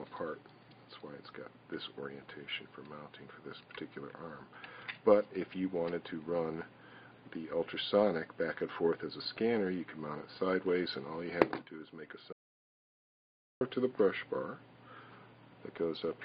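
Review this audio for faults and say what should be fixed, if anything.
At 12.33 s the sound cuts off abruptly into silence, with no room tone or noise floor underneath, and it returns mid-flow at 13.61 s. This is an audio dropout to silence lasting about 1.28 s, and whatever happened in that span is unrecoverable. The likely cause is a momentary loss of the input signal, such as a loose connection, a dropped link or an accidental mute, while the recorder kept writing silence. To prevent it, secure cables and wireless links and monitor input levels live so that a lost signal is caught while recording.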